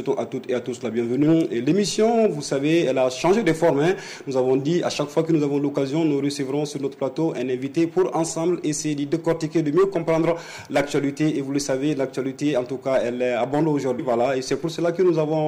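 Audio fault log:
13.98 s: damaged data in a compressed stream, a brief chirp, squawk, click or short hole as the decoder misreads corrupted frames, loses sync and resumes at the next frame header.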